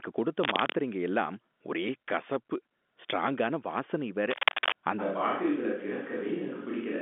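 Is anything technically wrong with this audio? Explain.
Yes. Two kinds of fault are audible in this speech, which comes over a telephone-band line limited to roughly 200 Hz to 3.5 kHz.

Cable scratch noise appears twice: from 0.42 to 0.73 s, just before "எல்லாம் ஒரே கசப்பு ஸ்ட்ராங்கான", and from 4.30 to 4.75 s, right after "கசப்பு ஸ்ட்ராங்கான வாசனை வேற". Each is a dense, ragged rustle that sits a little above the speech level. This is likely a worn lead or connector being moved, so its contact resistance jumps about and injects irregular bursts of noise.

At 5.01 s the sound abruptly becomes roomy and hollow and stays that way to the end. That change is a switch to a distant microphone. The level stays about the same, but room noise rises to a bed about 25 dB below the speech. The likely cause is that the close microphone dropped out and a farther pickup carried the signal from then on, capturing more reflections and less direct sound.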